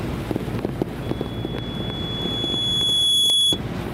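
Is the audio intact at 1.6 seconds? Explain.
No. Loudspeaker feedback squeal runs from 1.02 to 3.62 s. A 3.4 kHz loop tone swells over about two seconds, ending roughly 10 dB above the sound.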